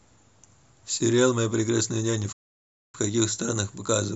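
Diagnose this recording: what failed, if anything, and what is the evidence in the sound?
The speech cuts out dead at 2.32 s and stays silent until 2.95 s, roughly 0.61 s of nothing, then carries on. That's a playback stall, most likely the player starving for data or its output thread getting blocked before it caught up.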